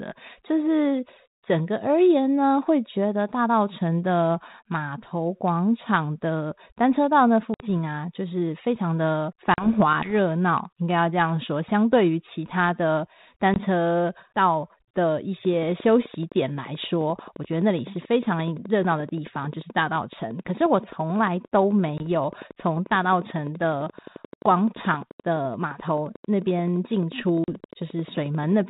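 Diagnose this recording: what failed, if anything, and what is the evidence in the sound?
Network stage: packets were dropped on a 32 kbit/s G.726 ADPCM call, causing packet loss. The codec itself adds only light grain. Silence fills each hole, and the decoder's adaptive predictor and step size drift out of step with the sender's. Hard-edged gaps occur at 7.54 s (60 ms), 9.54 s (40 ms), 13.54 s (20 ms), 21.98 s (20 ms) and 27.44 s (40 ms). Their lengths point to one to three lost packets each. After each gap the speech returns slightly distorted, then settles.

Analogue wiring or interface stage: a train of clicks runs from 15.45 s to 28.62 s. It most likely comes from interference from nearby equipment or a faulty connection or power supply. Uniform pulses tick at a regular 11.5 per second, around 150 in all, peaking about as loud as the speech. They are heard over the speech and through the pauses alike.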